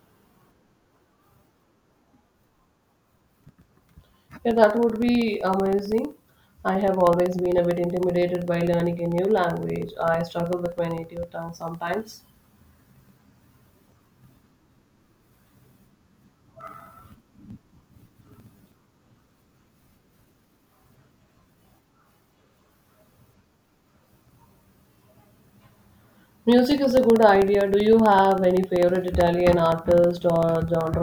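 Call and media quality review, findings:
Periodic USB or driver dropouts, 0.10–30.94 s: steady tick every 64 ms (about 16 per second) across the speech. Probable component: USB bus/audio driver stalled by a recurring background task, each stall losing roughly a millisecond of samples, filled with silence.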